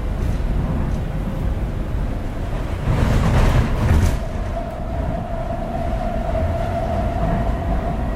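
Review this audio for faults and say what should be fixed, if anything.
Frames out of order at 2.14–2.35 s and 7.78–7.90 s: each stretch plays two adjacent blocks (104.5 ms, then 52.2 ms) swapped, a garbled flutter. Unlike a dropout or skip, no time goes missing. Reorder frames by sequence number before decoding.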